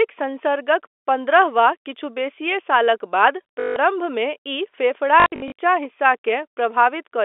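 Speech carried over a G.711 telephone channel, with the band ending near 3.5 kHz, and hit by two bursts of packet loss with the last packet repeated. From 3.6 to 3.76 s, a 160 ms gap is filled by replaying the same short block. That fits eight lost 20 ms packets, and it buzzes near 50 Hz. From 5.2 to 5.52 s, 200 ms of loss is scattered across 320 ms, the longest run 60 ms, producing brief robotic stutters.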